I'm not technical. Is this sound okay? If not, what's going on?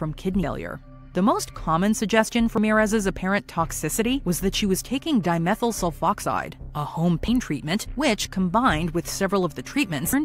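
No. At 2.58 s there's a tiny chirp or blip, over almost instantly. It comes from damaged data in a compressed stream: part of the file got corrupted, so the player misread that instant before picking the sound back up.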